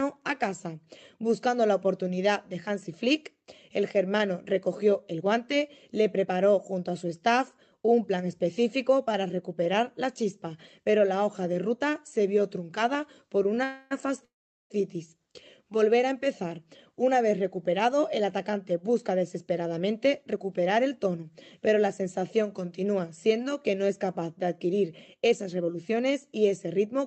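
Delayed packets likely emptied the jitter buffer twice, producing a call audio freeze from 13.64 to 13.93 s and again from 14.25 to 14.72 s. Each time the last sound is stretched into a fading fill before the audio resumes where it stopped, adding 0.27 s and then 0.45 s of delay, the second including about 0.4 s of silence. Later the overfilled buffer triggers a jitter buffer speed-up, cutting short pitch-period pieces so the audio runs hurried at unchanged pitch: 6% fast from 17.43 to 21.32 s, dropping around a fifth of a second, and 7% fast from 25.17 to 27.00 s, dropping roughly 0.15 s. Throughout, the call codec path limits the top end to about 8 kHz, which fits a wideband Opus setting.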